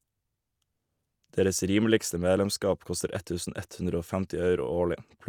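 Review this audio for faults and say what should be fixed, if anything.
Nothing stood out on listening, so there is nothing here that needs fixing.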